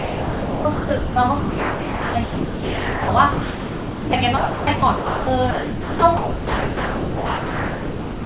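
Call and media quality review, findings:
Sound chopped by the voice detector, 0.0 to 8.25 s. Speech keeps dropping out, with about 6.6 s swapped for comfort noise. Component: likely the sender's VAD/DTX gating too aggressively. Band-limited to 4 kHz, consistent with G.711 A-law at 64 kbps.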